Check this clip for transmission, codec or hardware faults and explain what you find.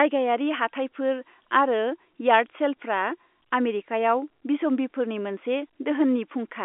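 No transmission, codec or hardware faults are present in this speech; the G.711 telephone coding path, with its 250 Hz to 3.5 kHz line band and nothing above 3.8 kHz, is working as intended.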